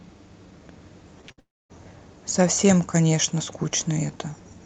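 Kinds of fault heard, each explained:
short concealed packet loss: Around 1.21 s and 1.28 s, about 20 ms of sound goes missing each time and is patched by stretching the preceding sound. It is heard as a quick smear or wobble. On a spectrogram, the patched stretch looks briefly frozen and blurred.
burst of packet loss: From 1.32 to 1.39 s roughly 60 ms is lost in a row, filled by continuing the last sound while turning it down. A short continuation fades, then later audio resumes. The waveform shows the copied sound shrinking in amplitude.
long network dropout: From 1.39 to 1.71 s about 0.3 s of sound disappears, likely from an interrupted network feed. A brief fading continuation gives way to roughly 0.24 s of silence. The waveform goes flat, and the spectrogram shows an empty vertical band before audio returns.
hard clipping: From 2.40 to 3.25 s the signal is driven about 6 dB past what a stage can pass, so peaks are sliced flat. 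Loud parts sound crackly and harsh. The waveform shows squared-off tops, and the spectrogram shows vertical smears of added high-frequency harmonics.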